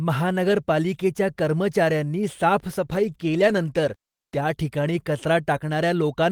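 From 2.87 to 4.45 s, a call bitrate drop coarsens the speech, which turns rough and watery. This fits the encoder falling from about 32 to 16 kbps.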